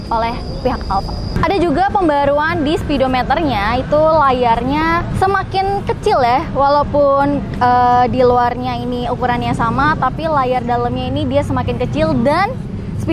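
Careful listening turned up nothing that stood out as a technical problem at any point in the recording.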